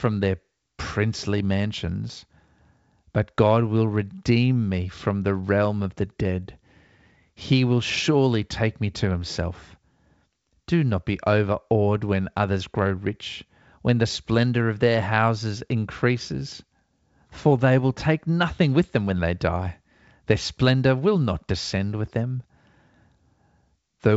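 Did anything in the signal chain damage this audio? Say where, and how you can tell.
No, the signal chain shows no damage: the speech carries the wideband telephone bandwidth of G.722 coding, with content reaching up to about 7.7 kHz and nothing above it, and any trace the codec leaves is faint at most.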